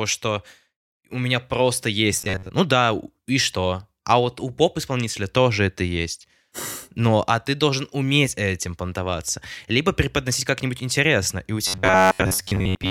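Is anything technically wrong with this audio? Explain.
Yes. Robotic sound from repeated short buffers appears from 2.17 to 2.52 s and again from 11.67 s to the end of the clip. In both stretches the speech turns into a rigid, metallic buzz fixed at 93.8 Hz that only loosely tracks the words. This is likely caused by audio arriving too seldom, so a segment of about 10.7 ms is replayed over and over for most of each stretch while the real audio is skipped.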